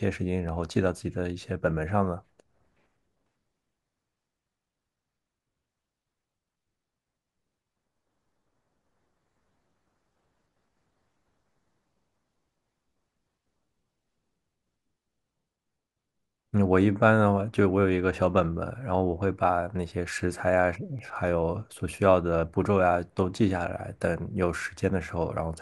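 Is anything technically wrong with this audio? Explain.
Yes. Two sharp clicks, at 0.49 s and 20.99 s, point to dropped samples. The likely cause is a few samples missing from the stream, under a millisecond each, so the waveform jumps abruptly to a later value. Each click is a thin vertical line across the spectrum.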